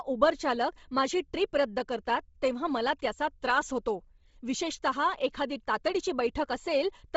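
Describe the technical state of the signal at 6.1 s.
At 6.1 s you're hearing the same damage that runs through the whole clip: heavy Bluetooth LC3 compression, likely. The speech has nothing above 7.7 kHz, and its top end sounds breathy and grainy, which fits a low-bitrate setting around 24 kbps with 7.5 ms frames.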